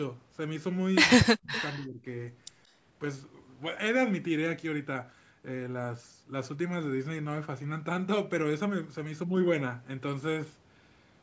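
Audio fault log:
1.20–1.53 s, speech suppressed in double talk: the sound drops sharply, by about 40 dB at its deepest, for around a third of a second. This is likely an echo canceller facing both sides at once, unable to separate talker from loudspeaker echo, and so turning everything down.
1.55–1.62 s, echo leak: a faint delayed copy of the speech surfaces, trailing by 177 ms and sitting about 20 dB below the direct signal. This likely comes from a loudspeaker endpoint whose canceller failed to remove everything its microphone caught, sending that residue back.
1.76–2.07 s, speech suppressed in double talk: a second dip, shallower at about 20 dB, lasting roughly a third of a second. It likely has the same cause as the first dip, with the canceller again attenuating the talker while the far side is active.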